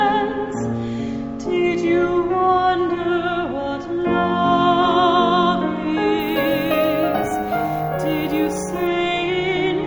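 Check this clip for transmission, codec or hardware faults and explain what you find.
One fault is present: imaging from sample-and-hold upsampling, from 6.20 to 8.87 s. Samples were repeated when raising 16 kHz to 48 kHz, so mirrored copies fill 8 to 16 kHz at about -21 dB. The result is a metallic fizz that tracks the sound's level. Unlike broadband noise, it moves opposite to the pitch.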